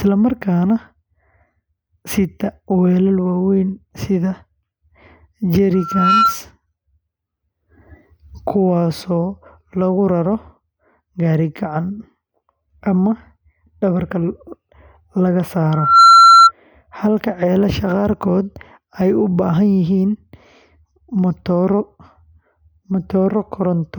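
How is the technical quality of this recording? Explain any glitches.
The recording has two bursts of loudspeaker feedback squeal. They occur at 5.73 to 6.40 s and 15.71 to 16.52 s. Each time, a 1.4 kHz tone swells within half a second to rise above the speech, especially the second. The microphone was re-amplifying the loudspeaker.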